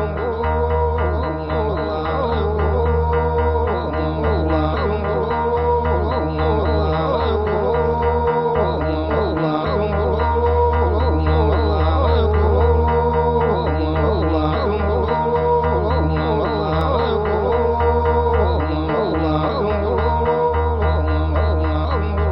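A nearby switch or static discharge likely arced into the line at 16.81 s: an electrical switching spike, heard as one sharp snap peaking around -20 dBFS.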